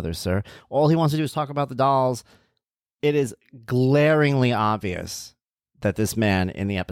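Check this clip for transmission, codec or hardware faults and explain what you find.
Listening closely, nothing in the speech stood out as a problem at any point.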